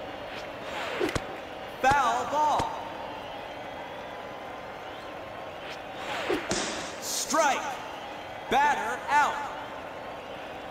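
No technical faults can be heard anywhere in the audio, and the signal stays steady and intact throughout.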